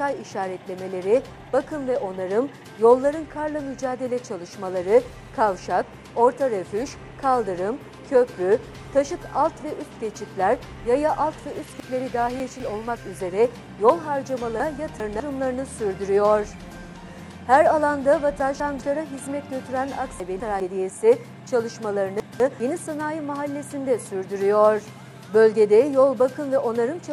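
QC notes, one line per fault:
11.8–12.6 s, 14.6–15.2 s, 18.4–18.8 s, 20.2–20.6 s and 22.2–22.6 s, chunks out of order: a 200 ms slice of audio turns up late and plays after material that should have followed it. It's three chunks late at 11.8 s, two at 14.6 s, and one at each of the last three spots. Nothing drops out, but the sequence jumbles briefly, with hard splices where unrelated waveforms butt together.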